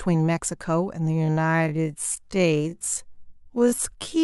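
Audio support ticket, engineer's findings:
Speech slows abruptly to half pace from 1.16 s to end, pitch unchanged. Time-stretched section, likely from a time-stretch stage padding audio to a target length by repeating short segments: duration doubled, pitch kept.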